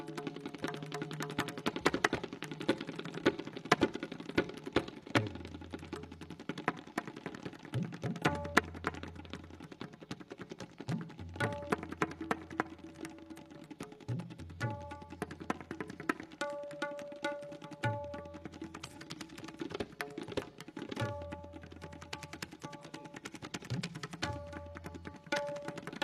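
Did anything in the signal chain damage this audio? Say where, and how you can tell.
Yes. The damage sits at the codec stage, where AAC frame loss with concealment occurred. At 18.85 s a brief patch runs to 18.98 s. It sounds smeared and noisy. The gap is about 43 ms long, which fits a single lost AAC frame. The decoder had nothing to decode there. It rebuilt the missing stretch from the last good spectrum, with randomised phase. That guess has the right energy but the wrong detail.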